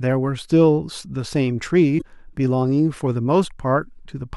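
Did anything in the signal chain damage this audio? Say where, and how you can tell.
Yes, codec stage: damaged data in the compressed stream at 1.95 to 2.02 s breaks decoder frame sync, giving a brief glitch at that point.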